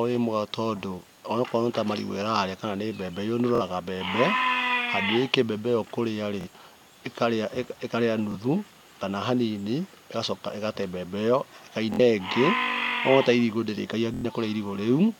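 Bluetooth stutter occurs at 3.55–3.62 s, 6.41–6.48 s, 8.32–8.35 s, 11.94–12.00 s and 14.14–14.26 s. Each time, audio data arrived late or not at all, and the receiver kept replaying its last short buffer, so the speech briefly buzzes on a repeated slice before jumping ahead. The skipped spans are 46 ms in the first, second and fourth events, 23 ms at 8.32 s, and 93 ms at 14.14 s, which fits whole lost frames of about 23 ms each.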